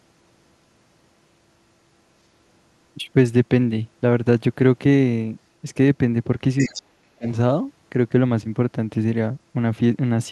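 An echo canceller that likely failed to clear the loudspeaker signal from the microphone lets the other side's voice leak through in this speech recording from 6.58 to 6.82 s. A faint second voice, roughly 15 dB below the main talker, comes through in a short scrap. That overlap also causes speech suppressed in double talk from 6.66 to 7.27 s. With both sides sounding at once, the canceller, likely unable to tell its own talker from the echo, pulls both down. The main voice sinks by as much as 40 dB, with about half a second of it affected in total.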